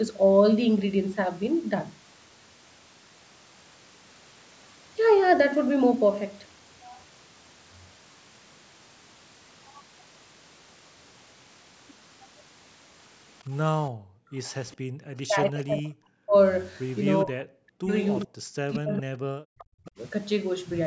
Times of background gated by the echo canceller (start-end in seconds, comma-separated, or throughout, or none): 14.76-14.94